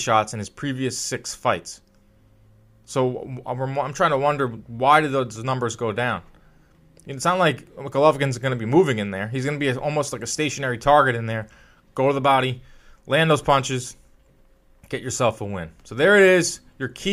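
At 1.45 s, just after "in his previous six", and again at 5.36 s, between "to wonder why did" and "numbers go down", there's a block of digital silence. A hole of about 0.67 ms, which fits a 32-sample block left unfilled, drops out with hard edges, so each lands as a tiny tick.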